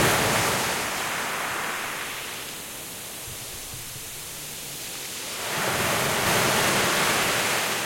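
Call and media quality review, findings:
Doubled audio track, 6.27 s to end of clip: second full-band copy abruptly enters about 0.4 s behind the original at roughly equal level, with no decay or room colour. Likely cause is a slower second capture path or an edit leaving two out-of-step copies mixed together. Persists through the final sound with no cut-off.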